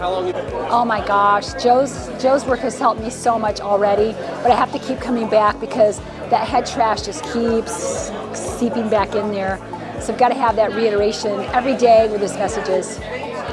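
Nothing technical stands out anywhere in this audio, so there's nothing here to pin to a time or trace back to a cause.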